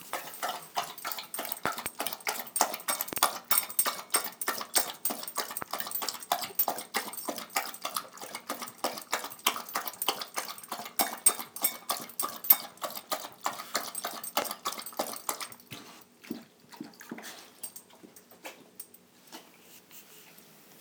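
Everyday sound carrying loud pops at 1.66 to 1.88 s and 3.13 to 3.20 s (each a double pop, up to about 25 dB above the signal), then single pops at 5.62 to 5.64 s and 14.42 to 14.44 s (about 20 dB). Each is likely a voltage pulse from a plug, switch, static or driver glitch. The sound runs on beneath each thump with no gap, unlike a dropout click.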